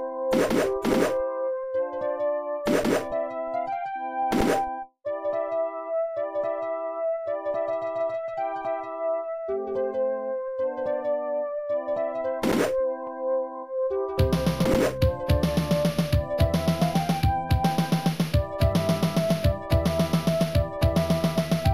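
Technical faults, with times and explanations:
No technical faults can be heard anywhere.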